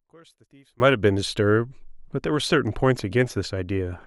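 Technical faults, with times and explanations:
0.0 to 0.8 s, one channel inverted: for the first 0.8 s the speech nearly disappears when heard in mono, dropping by about 31 dB, with only a faint residue left before the level returns to normal. The likely cause is reversed polarity on one stereo channel. The centred voice is almost identical in both channels, so summing them cancels it, and only the small differences between left and right remain audible.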